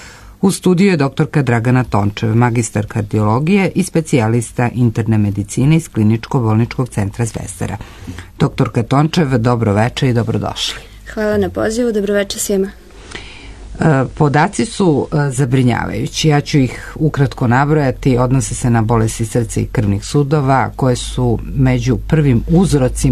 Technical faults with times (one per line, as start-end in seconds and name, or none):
12.61-15.50 digital radio blending to analogue